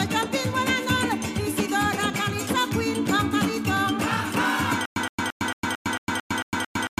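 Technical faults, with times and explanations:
4.86 s to the end: stutter with silent gaps, a 117 ms burst repeating every 224 ms with about 107 ms of dead silence between, likely a stalled stream replaying its last fragment.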